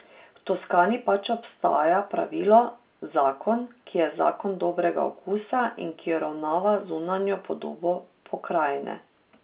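Nothing stood out on listening to this speech, which carries the narrow telephone bandwidth of A-law G.711 coding at 8 kHz and nothing beyond it.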